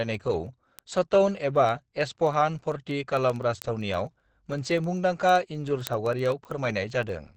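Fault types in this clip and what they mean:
Opus compression: Present for the whole clip, the speech sounds muffled and hoarse, with plainly audible codec damage and nothing above 8.7 kHz. This is likely Opus running in its speech-oriented SILK mode at wideband, which fits a low bitrate around 16 kbps. At that rate the encoder models the voice coarsely and trims the top of the spectrum, leaving a narrowed, rough-edged sound.
Word clock ticks: From 0.14 s to 7.35 s, sharp ticks recur at a steady rate of about one every 0.07 s, roughly a hundred in all. The receiving device runs on its own clock, unlocked to the sender's, and the two drift apart by a few hundred parts per million. Each time they slip past one another a single sample is dropped or repeated, and that discontinuity produces a tick.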